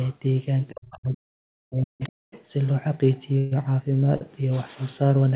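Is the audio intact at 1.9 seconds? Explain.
No, speech suppressed in double talk runs from 0.72 to 2.3 s: the speech dips deeply, likely because an echo canceller mistook overlapping talk for echo and turned it down.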